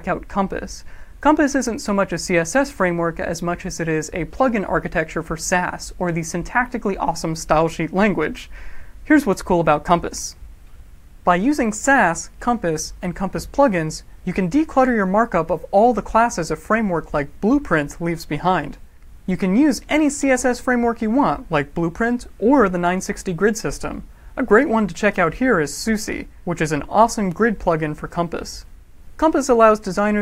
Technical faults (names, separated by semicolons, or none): none